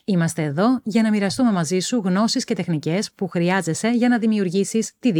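A short bit of speech, and nothing technically wrong turns up anywhere in it.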